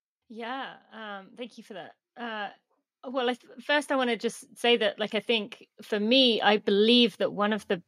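From 0.95 s to 6.52 s you get automatic gain rising: the AGC decided the input was too quiet and kept pushing its gain up, about 14 dB in total, so the speech and the background noise swell together slowly rather than jumping.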